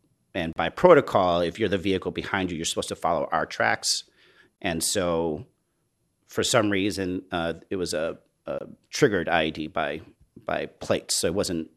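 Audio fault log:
0.53 to 8.61 s, gap at a join of encoded pieces: the speech drops into silence at 0.53 s (34 ms, just before "by protocol if you're"), at 4.56 s (23 ms, after "to follow our tracks") and at 8.59 s (23 ms, after "uh it was a"), recurring every 4.0 s. Each 4 s piece was encoded on its own and butted against the next untrimmed, so encoder start delay and final-frame padding leave a hole, its edges smeared, before the speech resumes where it stopped.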